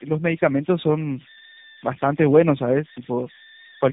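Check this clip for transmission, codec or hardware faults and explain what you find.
Two faults run through the whole speech clip.

Converter idle tones, throughout: an undithered delta-sigma converter settles into repeating bit patterns on small input. Here that produces a tone around 2 kHz, about 20 dB below the speech, audible in pauses and as graininess under the speech.

Tandem speech coding, throughout: the speech was decoded and recoded by two speech codecs in series, consistent with G.729A followed by AMR-NB near 10.2 kbit/s, with G.711 in between. Each stage degrades the previous one's output, leaving rough, warbly, muffled speech with nothing above 3.8 kHz.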